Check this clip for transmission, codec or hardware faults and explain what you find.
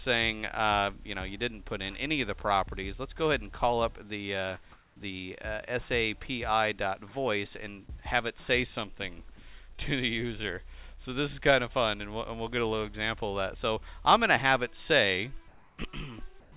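Two kinds of fault are present: three stretches of comfort noise replacing the background, and one short concealed packet loss. The call path is narrowband, with nothing audible above 4 kHz, which fits a G.711 A-law link.

Comfort noise in place of the background occurs at 4.72–4.96 s, 15.48–15.78 s and 16.40–16.52 s. In each gap the real background, sitting about 35, 30 and 27 dB below the loud passages respectively, gives way to a steady, featureless hiss. The first patch also shifts about 2 dB in level. The likely cause is discontinuous transmission: the sender's activity detector stops sending during quiet passages, and the receiver synthesises shaped noise until the signal resumes.

Short concealed packet loss occurs at 9.76–9.80 s. About 20 ms of audio failed to reach the decoder in time, and the receiver filled roughly 19 ms of that by extending the preceding sound before blending back into the real signal. 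At this length it is heard as a brief smear or wobble at that point rather than an obvious dropout.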